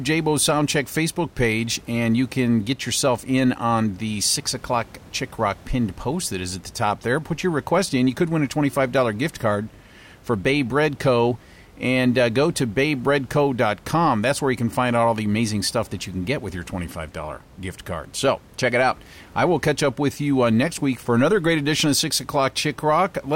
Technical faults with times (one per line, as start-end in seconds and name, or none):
none